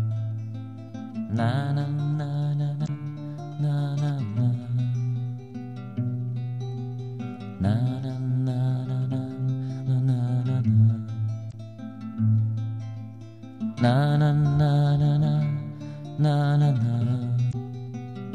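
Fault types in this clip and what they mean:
Damaged data in a compressed stream: corrupted bytes in the encoded stream made the decoder misread those frames, lose sync and hunt for the next valid frame header, producing brief chirps or blips of roughly 55 ms at 2.84, 11.48 and 17.49 s.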